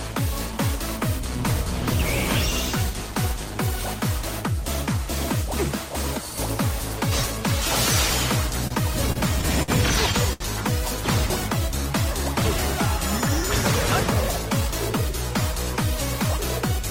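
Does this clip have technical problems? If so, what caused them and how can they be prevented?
Yes. There are four short stalls from late packets, at 8.67, 9.12, 9.63 and 10.33 s. Each time a packet missed its playout slot, the jitter buffer ran dry, so the receiver held the last sound for about 30, 30, 54 and 73 ms until the packet turned up and then resumed from the same point. Nothing is lost, but each spot sounds briefly frozen, with a faint buzz or dip. A deeper or adaptive jitter buffer would absorb this lateness.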